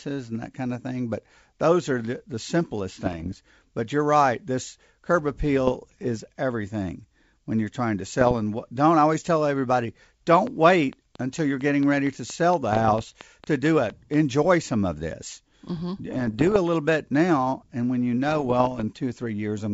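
Rough, crackling bursts from bit errors on an ADPCM link come in short patches at 3.04 to 3.35 s, 5.67 to 6.11 s (ending just before "everything when you're trying"), and 8.08 to 8.39 s (right after "when you're trying to"). Only a small fraction of a percent of bits is corrupted, but each flipped bit throws off the decoder's step size and prediction. The error therefore smears over several milliseconds as a gritty pop with a brief jump or dip in level, rather than a clean tick.

From 10.47 to 14.15 s a train of clicks runs over everything, pauses included. It is about 15 near-identical ticks at a steady 4.4 per second, peaking about 10 dB above the audio. The fixed shape and even pacing, likely from electrical interference, set these apart from the ragged, level-shifting bursts. One such burst overlaps them at 12.73 to 13.21 s.

More ADPCM bit-error bursts follow at 16.10 to 16.59 s, just before "a little bit now", and at 18.28 to 18.84 s. 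The wideband telephone coding underneath adds little audible damage of its own.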